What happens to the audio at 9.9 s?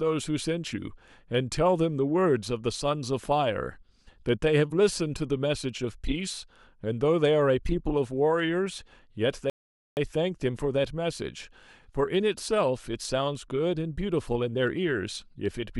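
At 9.9 s you're inside a rebuffering stall, from 9.50 to 9.97 s: the player ran dry, went silent about 0.47 s, then picked the speech up exactly where it stopped.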